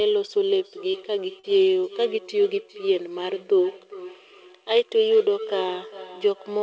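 A second device on the same call, sitting in the same room, is replaying what this microphone sent, and its output leaks back into the microphone where the local echo canceller cannot remove it. The result in this speech recording is feedback echo between two devices from 0.59 s to the end: each phrase returns at a steady interval of roughly 0.4 s, thinner and ringing, peaking at about 18 dB below the speech. Separately, two bursts of audio arrived too late for the decoder, and short concealed packet loss covers the gaps at 0.92 to 0.95 s and 1.39 to 1.45 s. The receiver extended the preceding sound to fill about 15 ms and 40 ms respectively before blending back, which is heard as a brief smear or wobble at each point. The call path itself passes nothing above 8 kHz, consistent with a wideband codec such as G.722.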